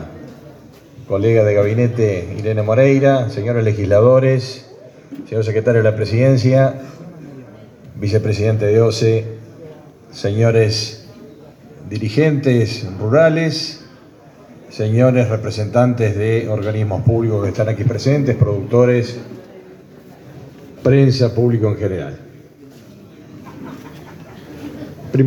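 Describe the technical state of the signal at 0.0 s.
At 0.0 s the signal is intact, with no technical fault present at that moment.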